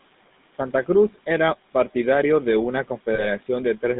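Across this speech recording the background sinks by about 17 dB between phrases and swells back under them. These are noise suppressor artifacts: the processor judges each frequency band frame by frame and pulls down whatever it takes for steady noise. The room noise it is acting on sits about 20 dB below the speech. The voice also has a buzzy, gravelly roughness and no content above 3.7 kHz or below 150 Hz, the signature of the GSM full-rate codec, whose pulse-driven excitation and narrow passband fit a 13 kbps GSM link. Between 0.52 and 0.88 s, parts of the speech sound swallowed, dipping by as much as about 13 dB over roughly a tenth of a second in total. This is speech cut by the noise suppressor, which mistook those softer stretches for noise and turned them down with the background. Just after "partidario de una", from 3.14 to 3.27 s, the sound freezes into a short rough, metallic ring. 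These are lost GSM frames, about 40 ms worth, patched by repeating the last good frame's settings.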